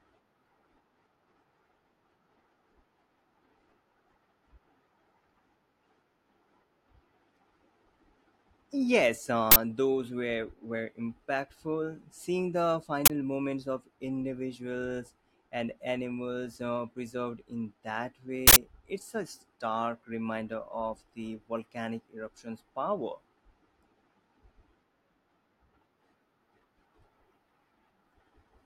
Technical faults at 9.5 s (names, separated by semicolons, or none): uninitialised buffer